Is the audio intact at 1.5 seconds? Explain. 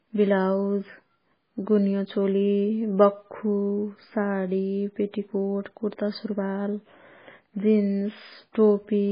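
No. At 1.5 seconds, as throughout the clip, the speech carries what is likely heavy MP3 compression. Starved of bits, the encoder has cut all treble at a fixed 5 kHz and zeroed weak frequency lines that then flicker on and off between frames, which fits a very low bitrate near 16 kbps. The result is dull, muffled speech with a watery, swirling texture, metallic chirps on s sounds, and smeared consonant attacks.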